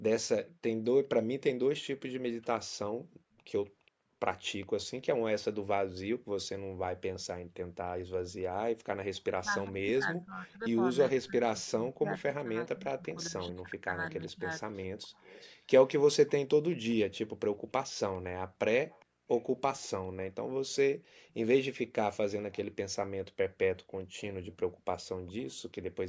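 From 3.86 to 4.83 s a faint second copy of the speech trails the original by 411 ms, about 25 dB quieter. This is an echo leak: a far-end loudspeaker's output likely reached its microphone and was not fully cancelled. It returns from 14.27 to 16.95 s, 17.98 to 21.34 s and 23.92 to 25.49 s with the same delay. On a spectrogram it appears as a ghostly repeat of the harmonic pattern shifted about 0.41 s to the right. In the waveform it shows as low-level energy filling the gaps after syllables.

Between 9.4 and 14.47 s the speech repeatedly dips and drops out in pieces, totalling around 4 s. The deepest cuts reach about 25 dB. This is speech suppressed in double talk, likely an echo canceller clamping down while both sides talked. The waveform shows chunks of the envelope abruptly shrinking. The spectrogram shows the harmonics fading or vanishing in patches. The spectrum stops at 8 kHz, as expected from call processing.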